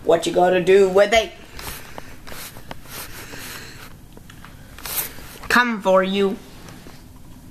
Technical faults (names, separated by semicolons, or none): none